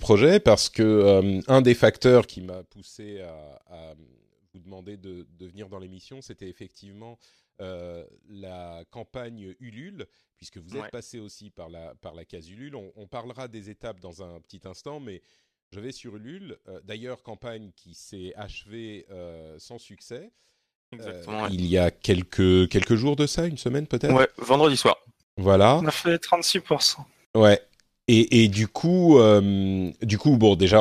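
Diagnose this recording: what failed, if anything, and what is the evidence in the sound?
Zipper noise from the gain stage, applied in steps. From 2.20 to 2.62 s the speech drops about 20 dB under a fast ticking. From 21.12 to 21.63 s it rises about 20 dB the same way. The level jumps in unsmoothed 2 dB steps, roughly 20 to 30 per second. Each step clicks.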